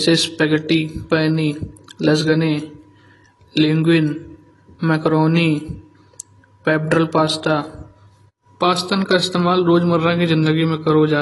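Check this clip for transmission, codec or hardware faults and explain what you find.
One codec fault runs through the whole clip: AAC compression. The speech has nothing above 11.5 kHz and sounds dull, with a fizzy, smeared texture on sibilants. The likely cause is AAC-LC quantising its spectral lines coarsely and dropping the top band, which fits a bitrate around 32 kbps.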